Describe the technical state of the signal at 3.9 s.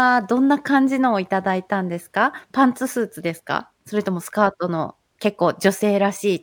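At 3.9 s you're hearing the imaging from linear upsampling that runs through the whole clip. The straight-line interpolation dulls the top end, which points to a 24 kHz to 48 kHz rate change, and leaves a mirrored copy between 12 kHz and 24 kHz, roughly 30 dB down. That gives the speech a faint metallic shimmer on sibilants.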